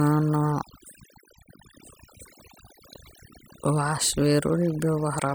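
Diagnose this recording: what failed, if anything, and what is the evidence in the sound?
Overdone noise removal runs through the whole speech clip, pointing to the call-processing stage. Between phrases the background drops to near silence, broken only by isolated twinkling specks. The suppressor is set too hard, so it mutes any frequency band that sits close to its noise estimate, taking the quieter parts of the voice with it. Low-bitrate codec damage smears the whole signal; here the gaps are conspicuously empty.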